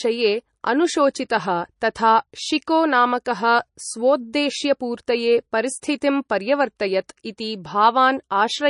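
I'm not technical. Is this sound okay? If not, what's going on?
No. The speech sounds watery and dull throughout, with nothing above about 10.6 kHz. That is likely heavy MP3 compression, which drops detail to save space. At 3.25 s there is pre-echo: a brief hiss arrives just before a sharp sound, which then lands soft and smeared.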